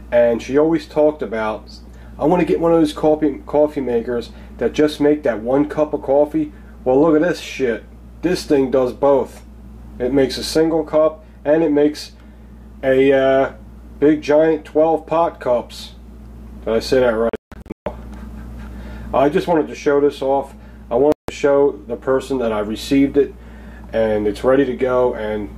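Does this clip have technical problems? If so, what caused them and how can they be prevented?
Yes. The sound cuts to silence in broken bursts from 17.29 to 17.86 s, with the longest gap about 160 ms, and again for 160 ms at 21.12 s, resuming as if it had played on. This is likely a Bluetooth dropout, with packets failing to reach the headphones in time. Keeping the headphones close to the source, clear of obstructions and away from busy 2.4 GHz interference helps prevent it.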